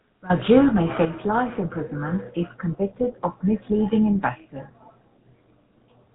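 Speech heard through the GSM full-rate codec throughout: the vocal tract model excited by sparse regular pulses gives a buzzy, gravelly roughness, and nothing passes above 3.9 kHz. The plainly audible damage fits a 13 kbps GSM full-rate link. At 1.05 s the voice and background drop suddenly by about 6 dB, a step that points to a microphone volume stepped down, most likely by call software lowering the input gain after judging the level too high.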